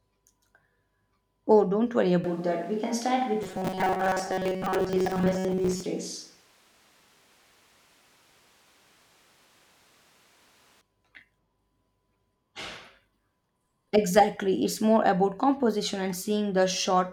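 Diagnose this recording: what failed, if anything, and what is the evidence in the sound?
Right after "don't worry", at 2.24 s, the speech abruptly turns roomy and hollow with thinner bass, reverting at 10.81 s. Level stays about the same, with background noise roughly 35 dB below the speech. The capture stage likely switched to a distant microphone after the close one dropped out.

From 3.43 to 5.86 s the speech becomes a rigid metallic buzz at 188 Hz that loosely tracks the speech. This is robotic sound from repeated short buffers, likely at the driver or buffer stage. A period near 5.3 ms fits a tiny replayed buffer, with most of the real audio skipped.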